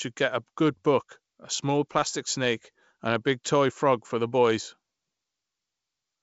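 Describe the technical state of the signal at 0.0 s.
At 0.0 s the audio is intact, carried over G.722 wideband telephone coding at 64 kbit/s with the speech band reaching up toward 7 kHz.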